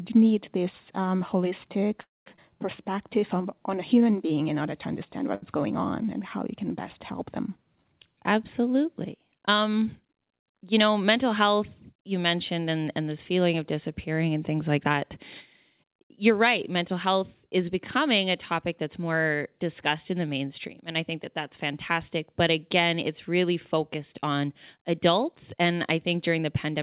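At 2.02 to 2.28 s the sound stops for about 0.24 s, a brief trailing continuation that drops to silence for roughly 200 ms, then resumes exactly where it left off. This is a call audio freeze, likely packets held up until the jitter buffer ran dry. Unlike a skip, nothing is lost; a gap is inserted.

Moments later, at 2.36 to 2.40 s, a skip ahead does the opposite. Around 150 ms of audio vanishes and the two sides are joined with only a 15 ms patch, so the sound lurches forward instead of pausing.

From 2.82 to 4.17 s, ending just before "being in order to", a jitter buffer slow-down repeats tiny pitch-period pieces, adding 154 ms and running at 89% speed. The pitch stays put while sounds drag, which separates it from a stall's single held sound.

At 5.35 to 5.44 s a short stall from a late packet stretches one sound for 70 ms with a faint buzz or dip, then carries on with nothing missing. 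It is one held spot, not a sustained drift.

Three jitter buffer speed-ups trim pitch periods to shed delay. From 10.64 to 10.96 s the rate is 111%, losing about 40 ms. From 14.77 to 15.17 s, right after "of disappearing and things", it is 133%, about 150 ms removed, clearly hurried. From 15.83 to 17.48 s, just before "is becoming a topic", it is 107%, about 100 ms removed. Pitch stays steady throughout, unlike a skip's abrupt jump. Across the clip the band stops at 4 kHz, which fits a 64 kbps G.711 mu-law call path.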